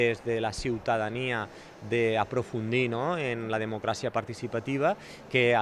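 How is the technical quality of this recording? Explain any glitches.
The technical quality holds up throughout, and there are no glitches to explain.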